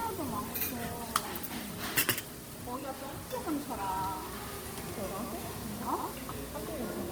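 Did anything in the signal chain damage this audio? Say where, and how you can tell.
Yes. At the network/playback stage, this is an adaptive stream starting at a low bitrate. From 0.0 to 4.0 s the treble is dull and artefact-heavy, which fits Opus near 16 kbit/s. At 4.0 s it steps up to something like 64 kbit/s with no gap, unlike a dropout.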